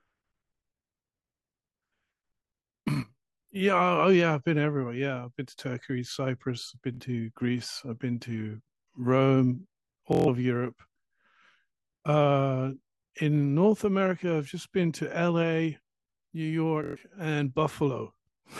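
Bluetooth stutter hits at 6.95 to 7.01 s, 10.13 to 10.28 s and 16.84 to 17.04 s. Late packets made the receiver loop its last short slice, so it sounds like a buzzing repeat, not a silent dropout. Speech then jumps ahead, losing about 46, 139 and 139 ms.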